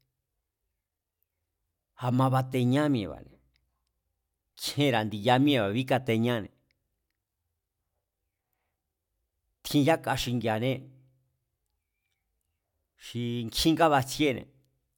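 No technical faults can be heard anywhere in this speech recording. There is no point in the audio where anything goes wrong.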